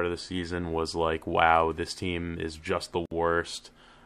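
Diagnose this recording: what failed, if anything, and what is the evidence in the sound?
A gap at a join of encoded pieces breaks the speech at 3.06 s. About 58 ms of silence opens, with smeared edges. The speech resumes where it stopped. Separately encoded pieces were joined untrimmed at the codec stage, keeping encoder delay and final-frame padding.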